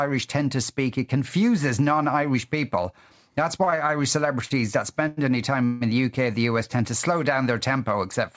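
From 3.64 to 3.91 s there are repeated stalls (stutter): four brief holds, the longest 27 ms and about 72 ms in total. Packets reached the jitter buffer more slowly than they were played, so it kept running dry. Each time, the receiver extended the last sound. Nothing is lost, but the speech drags and stutters through about a quarter of that span.

Two short stalls from a late packet follow, at 4.45 to 4.52 s (54 ms) and at 5.08 to 5.19 s (92 ms), the second just before "any time in the". Each time a packet missed its slot, the buffer emptied and the receiver stretched the last sound until the packet arrived. The result is a held sound with a faint buzz or dip, and the audio then resumes where it left off.

At 5.65 to 5.83 s, between "any time" and "in the", a call audio freeze holds the sound for 157 ms as a fading buzz or hiss that never reaches silence. The likely cause is packets delayed in transit that drained the jitter buffer. 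Playback then continues from the same point, so a gap has been inserted and nothing has been dropped. Throughout, nothing is present above 8 kHz, which fits a wideband call codec such as G.722 at 64 kbps.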